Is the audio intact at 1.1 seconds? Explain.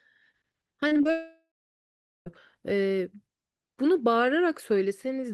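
No. At 1.1 seconds the audio sits between two related faults. From 0.87 to 1.07 s there is repeated packet loss (robotic sound): four short holes, the longest about 37 ms, each patched by stretching the sound just before it, so about half of that 0.2 s span is synthetic fill. It sounds choppy, but the sound keeps returning between holes.

Right after, from 1.11 to 2.28 s, comes a long network dropout, likely a sustained break in packet delivery. About 1.15 s of audio never arrives. The receiver extends the last sound as a fading buzz or hiss, then about 0.8 s of silence follows before the audio resumes with that stretch gone. Unlike the robotic stretch, nothing real comes back between the gaps, and the fill decays into silence.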